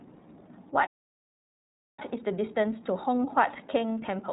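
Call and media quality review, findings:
iLBC codec, throughout: band-limited speech with nothing above 4 kHz, plainly audible roughness and a synthetic edge. Each 30 ms frame's excitation is coded independently, and the artefact pattern fits iLBC's 13.33 kbps mode. Narrowband VoIP path confirmed.

Playback stall, 0.86 to 1.99 s: output drops to silence mid-phrase for about 1.11 s, then resumes. The likely cause is the player's buffer running dry or its output thread blocking, with nothing written to the device until recovery.

Time-compressed catch-up, 1.99 s to end: speech runs hurried at about 1.15x with pitch unchanged. The player is trimming its post-stall backlog by cutting short segments and cross-fading the joins.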